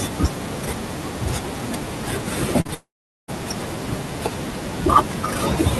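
Short concealed packet loss occurs at 2.61 to 2.67 s and again at 2.67 to 2.70 s. The receiver patched each gap by extending the previous sound, leaving a brief smear.

From 2.74 to 3.30 s there is a long network dropout, likely the cause. A fading buzz gives way to about 0.4 s of silence. The audio then resumes with that stretch lost.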